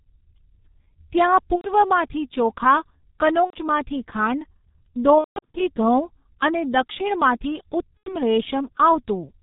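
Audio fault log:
Throughout: G.723.1 codec at about 6.3 kbit/s, heavily coding the speech in 30 ms frames with nothing above 4 kHz, leaving it muffled and hoarse with smeared consonants.
1.55–1.71 s, 3.44–3.56 s, 5.18–5.60 s, 7.98–8.14 s (just after "અને દક્ષિણમાંથી"): VoIP packet loss concealed by the speech codec. About 90 ms went missing each time, and about 270 ms was spread over the 5.18 s stretch with its longest gap near 180 ms. The decoder stretched its last pitch and filter, so the speech turns into a fading buzzy tone or coloured noise and stays weak after it resumes.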